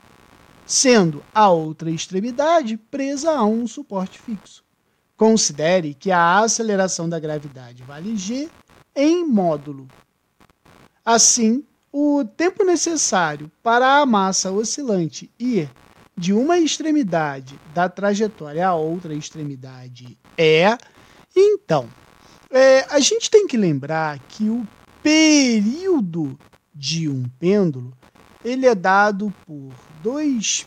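Computer activity noise runs through the whole clip, from start to finish. As the processor, graphics card or mouse changes its load, the current it draws shifts the ground that the audio circuit shares with it, and that shift lands in the signal. It comes through as a faint buzzing, chirping texture pulsing somewhere around 70 times a second, sitting roughly 35 dB under the sound. It rises and falls with the computer's work rather than with the audio itself.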